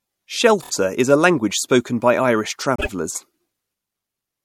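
Repeated frames at 0.62–0.71 s and 2.76–2.89 s: a 26 ms block plays three extra times, then a 52 ms block twice more. Each stutters, and the waveform shows identical copies placed side by side.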